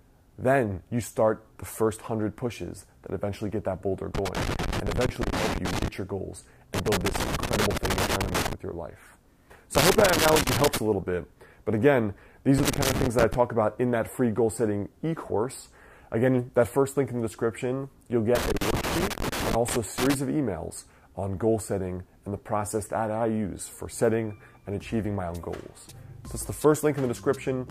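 A worn or dirty contact in the signal path is making and breaking as it shifts, a loose connector crackle that keeps chopping the signal into fragments. It flares up five times: 4.15 to 5.88 s, 6.74 to 8.53 s, 9.75 to 10.78 s, 12.58 to 13.34 s, and 18.35 to 20.14 s. Each time the audio breaks into an irregular, scratchy burst of crackle, with rough dropouts.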